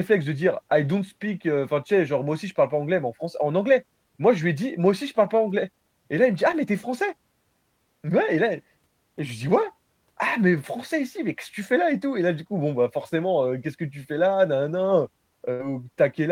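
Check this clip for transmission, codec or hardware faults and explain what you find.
Two transmission faults are audible, both from lost packets.

At 6.51 to 6.55 s, just before "mais tu es", there is short concealed packet loss. About 20 ms went missing. The decoder patched it by extending the previous sound, leaving a brief smear.

At 15.53 to 15.61 s comes a burst of packet loss. Roughly 60 ms never arrived. The receiver stretched the last sound into a fading fill, then jumped ahead, dropping the speech in between.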